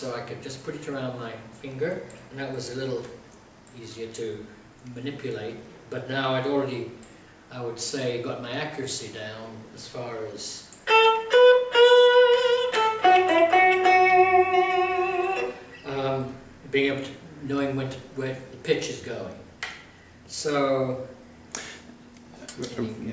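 No technical fault can be heard anywhere in the audio.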